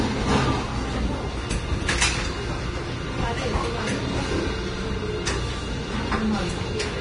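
Vorbis compression damage runs throughout: nothing survives above 10.6 kHz, and the remaining treble sounds hissy and grainy, with roughened tones and smeared attacks. The likely cause is a low bitrate, around 30 kbps, quantising the high-frequency detail into noise.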